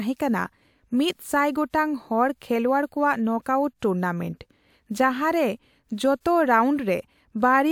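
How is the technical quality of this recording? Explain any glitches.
The recording shows no technical glitches, and the signal stays continuous and intact throughout, with nothing that points to a problem in capture or transmission.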